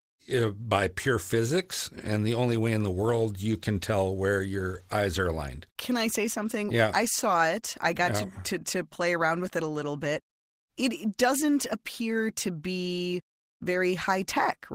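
Speech recording with no faults to report: no dropouts, clipping, distortion or glitches at any point.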